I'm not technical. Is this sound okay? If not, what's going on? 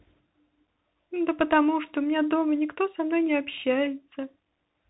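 No. The speech runs through a Bluetooth CVSD headset codec throughout. Nothing above 3.8 kHz survives, so it sounds muffled, with scratchy s sounds and a grainy hiss underneath.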